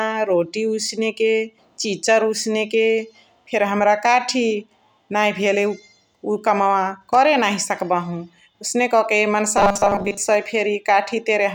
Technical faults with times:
9.57-10.17 robotic sound from repeated short buffers

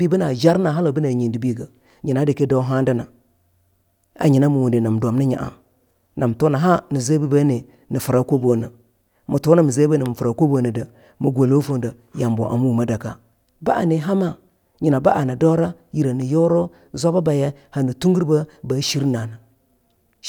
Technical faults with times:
none

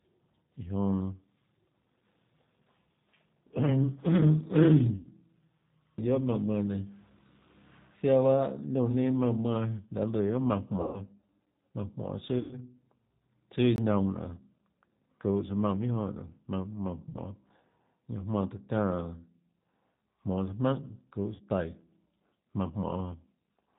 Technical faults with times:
0.00-23.79 G.729 codec
4.96-5.07 VoIP packet loss concealed by the speech codec
10.81-11.00 VoIP packet loss concealed by the speech codec
12.39-12.58 VoIP packet loss concealed by the speech codec
13.76-13.78 block of digital silence
17.09-17.19 VoIP packet loss concealed by the speech codec
21.35-21.43 VoIP packet loss concealed by the speech codec

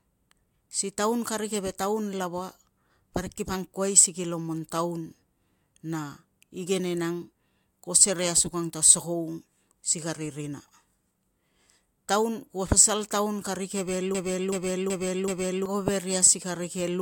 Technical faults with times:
14.15-15.66 broken-record loop

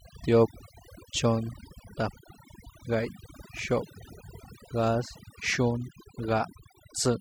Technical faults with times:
0.00-7.20 overdone noise removal

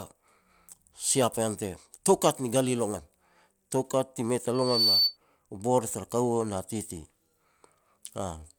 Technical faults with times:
4.54-5.17 loudspeaker feedback squeal

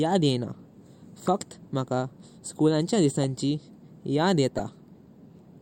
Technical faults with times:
1.27 corrupt frame decoded
4.56-4.60 corrupt frame decoded

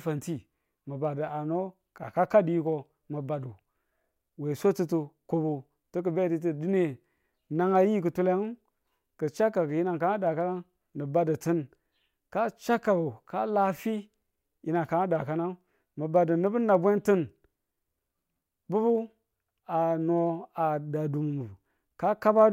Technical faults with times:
0.10-22.53 clock slip clicks

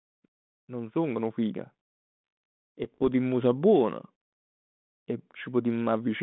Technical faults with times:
0.66-1.49 automatic gain rising
2.84-3.03 bit errors on an ADPCM link

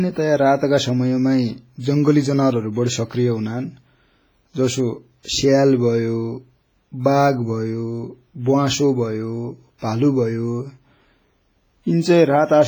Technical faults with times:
0.00-12.68 WMA compression
5.23-5.25 pre-echo

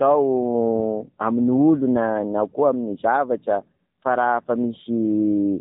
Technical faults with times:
0.00-5.60 AMR narrowband mobile codec

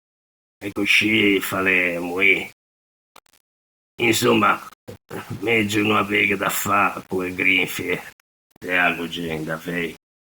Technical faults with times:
0.00-10.27 low bit depth without dither

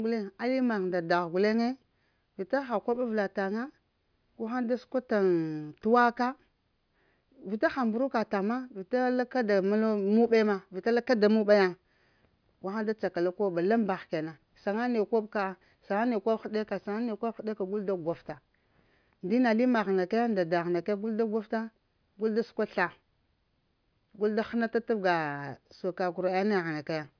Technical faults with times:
none

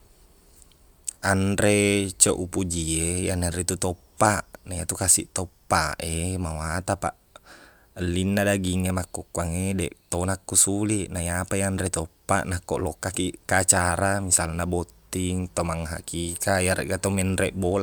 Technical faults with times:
none

